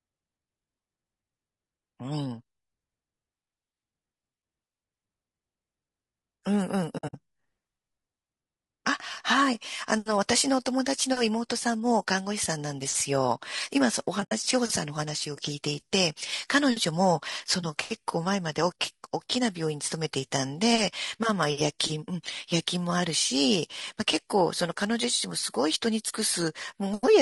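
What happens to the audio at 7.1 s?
AAC frame loss with muting runs from 6.97 to 7.14 s. Across those 160 ms the decoder received nothing for a total of about 120 ms, in several short gaps, the longest roughly 70 ms. That pattern fits a handful of dropped AAC frames. For each missing frame the decoder substituted silence, and the overlapping transform windows ramped the sound down and back up. The result is a stuttering string of soft-edged dropouts.

The same stretch also has a rough, grainy texture, with noise filling the gaps between harmonics and a thin, synthetic-sounding top band. This is most likely low-delay AAC compression (AAC-ELD). Its short frames separate pitch harmonics poorly, and the damage is plainly audible, consistent with a bitrate around 32 kbps.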